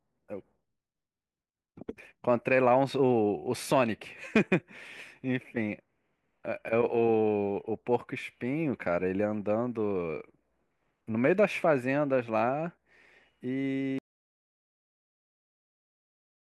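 At 13.99 s the speech just stops dead, and what follows is an audio dropout to silence that runs right through to the end, about 2.5 s of it. There's no tail, no fade, and no room tone underneath, just silence. That points to the input going away mid-recording, likely a disconnected mic or a dropped link, while the recorder kept writing empty samples. Whatever was said in that last stretch is simply gone.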